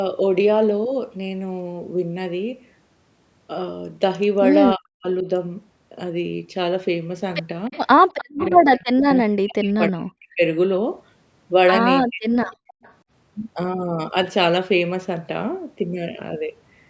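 A speech recording carried over a call path, band-limited with nothing above 8 kHz, in which the talker's speech is suppressed in double talk at 4.76 to 5.27 s, 8.27 to 10.42 s and 12.02 to 12.46 s, pulled down by as much as roughly 40 dB for about half a second, then about one and a half seconds, then under half a second. This is likely the echo canceller failing to separate this voice from loudspeaker echo while both sides spoke. Echo leak appears at 7.71 to 8.47 s, 9.13 to 9.18 s and 12.46 to 12.94 s as a delayed copy of the voice trailing by 305 ms, around 15 dB below the speech in the first two and around 25 dB below in the last, consistent with residual loudspeaker pickup the canceller left unremoved. Within that last stretch, at 12.74 to 12.82 s, the background is gated by the echo canceller, with the room sound dropping by about 37 dB for a brief moment before returning as the canceller releases.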